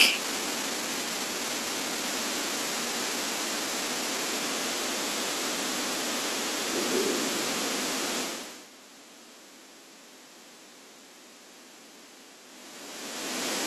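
No technical faults can be heard anywhere in the speech.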